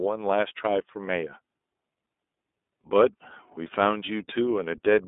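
iLBC codec damage runs throughout the speech, plainly audible. Each short frame, consistent with iLBC's 30 ms mode at about 13.33 kbps, is coded on its own, leaving a rough, synthetic edge. The band sits near 250 Hz to 3.6 kHz, with nothing above 3.8 kHz.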